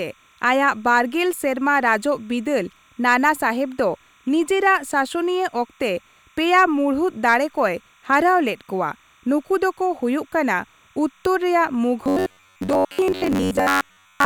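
A speech recording with a steady chirping warble running behind it from start to finish: timecode bleed, where linear timecode at 30 frames per second leaks in from a nearby track or cable. Its square wave flips between pitches around 1 and 2 kHz and sits roughly 35 dB below the speech. On a spectrogram it appears as constant horizontal bands near 1 and 2 kHz with their harmonics, unbroken through pauses. From 12.04 s to the end the speech turns into a rigid, metallic buzz at 93.8 Hz that still loosely follows the talking. This is robotic sound from repeated short buffers, likely caused by audio arriving too seldom so that a roughly 10.7 ms chunk is replayed in place of the missing material, with most of that stretch being repeats. The waveform shows a near-identical short cycle tiling that section, and the spectrogram shows evenly spaced harmonic lines at multiples of 93.8 Hz.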